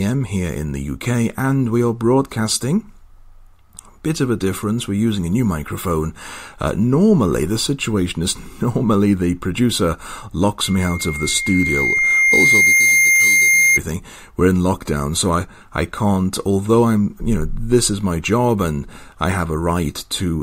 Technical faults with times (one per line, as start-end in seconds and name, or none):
10.64-13.80 loudspeaker feedback squeal